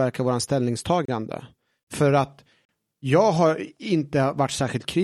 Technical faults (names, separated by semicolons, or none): Bluetooth stall